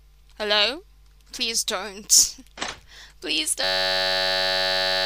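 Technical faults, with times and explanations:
3.64–5.05 s: system hang loop. The system froze and one 10.67 ms slice of buffer kept replaying, about 133 times, which gives a steady 93.8 Hz buzz, fits a 512-sample buffer.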